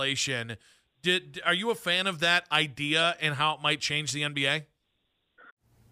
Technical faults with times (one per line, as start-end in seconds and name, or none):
2.99-3.03 corrupt frame decoded